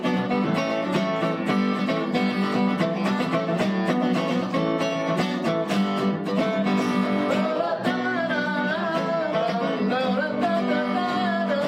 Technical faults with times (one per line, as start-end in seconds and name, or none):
0.00-11.68 imaging from linear upsampling